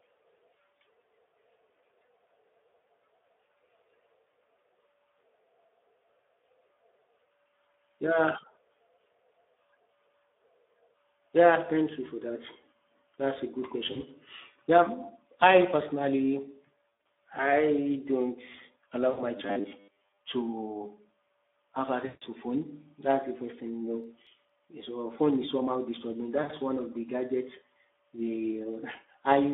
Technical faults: Speex codec; VoIP packet loss concealed by the speech codec; robotic sound from repeated short buffers; CD scratch ticks

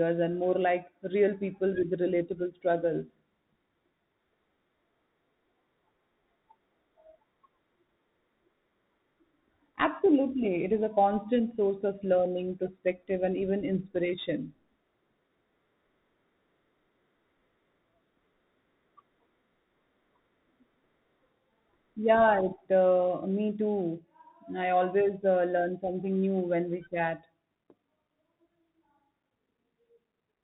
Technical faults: Bluetooth CVSD headset codec

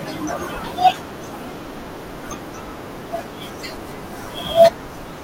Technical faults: sample clock jitter

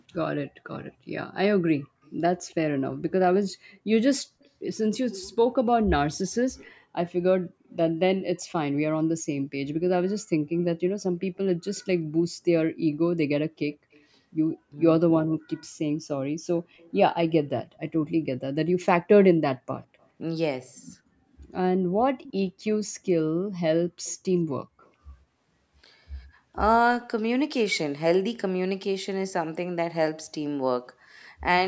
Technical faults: background gated by the echo canceller; echo leak; speech suppressed in double talk

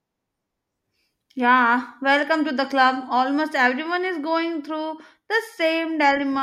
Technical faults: resampler restarted on every block

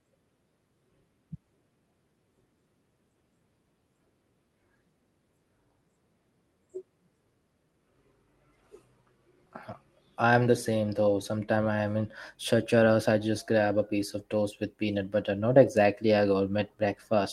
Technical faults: none

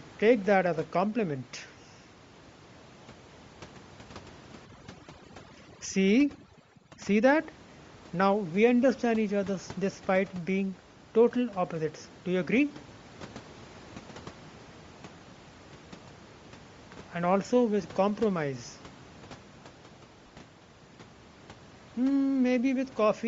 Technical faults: Bluetooth LC3 compression; echo leak; overdone noise removal; lost LE Audio frames

